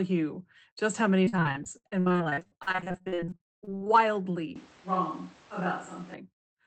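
Repeated packet loss (robotic sound) runs from 1.25 to 3.88 s, starting just after "you just how many". Dozens of short dropouts, the longest about 61 ms, are each patched by stretching the preceding sound. Nearly half the span is filled this way, so the speech turns choppy, with pieces missing.

A switch to a distant microphone follows from 4.56 to 6.14 s, likely because the close microphone's signal dropped out. The speech abruptly becomes roomy and hollow, loses bass, falls about 5 dB in level and picks up more background noise. It cuts back just as suddenly. Throughout, the Opus call path keeps the audio band-limited to around 8 kHz.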